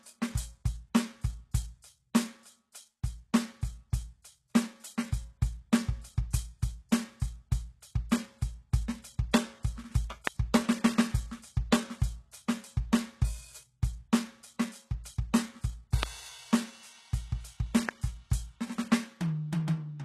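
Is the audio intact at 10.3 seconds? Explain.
No. At 10.27 s a single loud pop cuts sharply through the music, roughly 25 dB above it, while the music carries on underneath. This is likely a sudden voltage step or pulse, from a plug, switch, static or driver glitch, added to the signal and shaped by the circuits after it.

The treble also sounds gritty and metallic here, with nothing above 12.3 kHz. The likely cause is HE-AAC compression at a rate that fits 16 kbps. The treble is rebuilt from copied lower bands, so harmonics no longer line up across the crossover.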